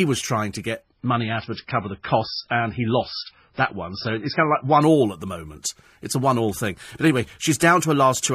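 A speech clip that drops to an adaptive stream at a lower bitrate for about four seconds, from 0.82 s right after "was trying to" until 4.82 s, just before "all at the moment". The quality falls suddenly with no gap: nothing survives above 5.6 kHz, and the codec smearing thickens, which points to a very low-bitrate MP3 rendition, around 16 kbit/s. The player probably switched down when the connection slowed, then jumped back up.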